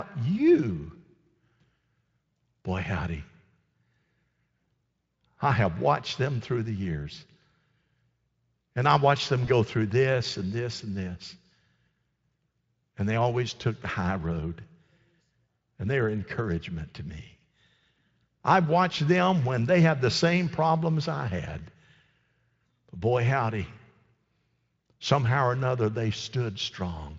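Speech carried through the Speex codec, which at this light setting adds little audible damage, has one brief VoIP packet loss concealed by the speech codec at 9.45 to 9.51 s. A single 20 ms packet went missing. The decoder filled it by extending the last pitch and spectral shape at falling gain, producing a short stretched, fading sound that recovers over the next few tens of milliseconds. On a spectrogram the sound flattens into a steady, fading band. On the waveform a short, overly regular stretch appears.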